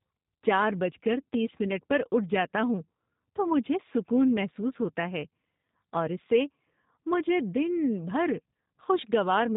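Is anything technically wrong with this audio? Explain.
Yes. Throughout, the speech sounds rough and faintly synthetic, with nothing above 3.8 kHz: G.729 codec damage, rebuilding the voice from filter, pitch and pulse parameters, which fits an 8 kbit/s stream.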